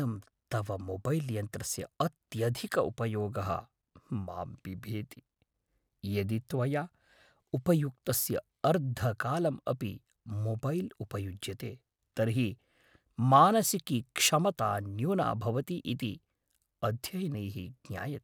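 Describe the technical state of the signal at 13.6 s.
At 13.6 s the speech signal is intact, with no audible technical fault at that moment.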